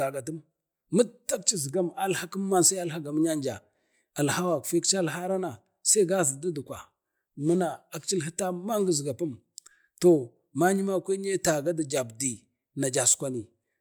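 No technical faults can be heard anywhere in the recording; the signal stays continuous and stable throughout.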